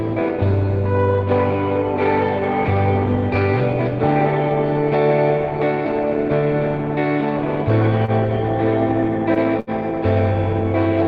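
At 8.05 s, 9.34 s and 9.60 s the audio hangs briefly: three short stalls from a late packet. Each time the jitter buffer ran dry, so the receiver stretched the last sound to bridge the gap, 27 ms, 18 ms and then 72 ms, before resuming where it left off, with nothing lost. They sound like slight drags with a faint buzz or dip. A spectrogram shows smeared, frozen horizontal bands; the waveform shows a repeating, periodic stretch.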